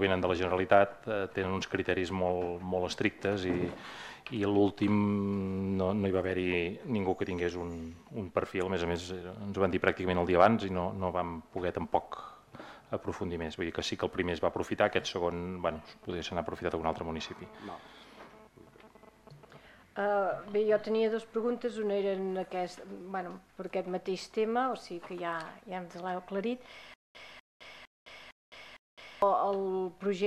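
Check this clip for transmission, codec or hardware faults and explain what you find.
There is one fault, near the end of the clip. From 26.94 s to 29.22 s the same 246 ms burst plays five times, each followed by about 211 ms of dead digital silence, so it hammers at a steady 457 ms rhythm. This is a stutter with silent gaps, likely from the player or stream stalling, replaying its last buffered fragment at each retry and then running dry. Whatever audio belonged in that stretch never plays.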